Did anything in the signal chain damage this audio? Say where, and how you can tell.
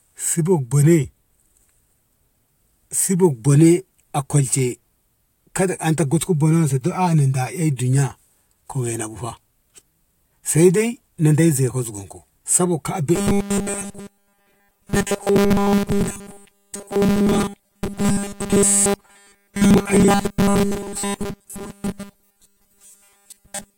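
Yes. From 13.16 s to the end, the speech becomes a rigid, metallic 200 Hz buzz that only loosely tracks the words: robotic sound from repeated short buffers. At the driver or buffer stage, essentially every 5 ms slice is likely being replayed while fresh audio is skipped.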